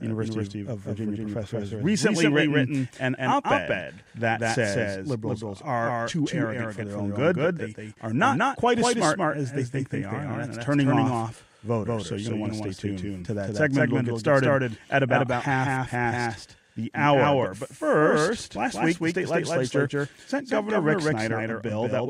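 From start to finish, every syllable of the speech arrives twice: a second copy trails about a fifth of a second behind and sits at roughly the same loudness, so the speech sounds stuttered and smeared rather than roomy. This is a doubled audio track. The trailing copy is full-band, with no decay or reverberant colouring, which points away from a real echo. The likely cause is the same signal reaching the mix twice, once through a slower capture path.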